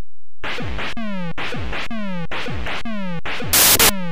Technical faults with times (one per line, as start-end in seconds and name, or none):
3.53-3.89 samples built from the wrong bytes